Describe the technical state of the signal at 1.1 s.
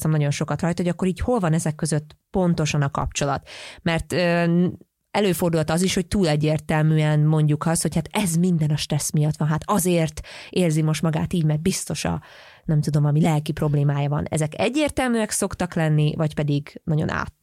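At 1.1 s the signal is intact, with no audible dropout, distortion, clipping or other fault at that point.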